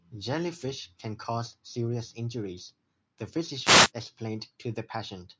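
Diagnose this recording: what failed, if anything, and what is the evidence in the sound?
The wireless microphone noise hits come from the analogue FM radio link ahead of the call processing, whose band tops out at 8 kHz. Short bursts of static at 0.57 to 0.67 s and 3.62 to 3.91 s mark multipath fades, where receiver noise surges.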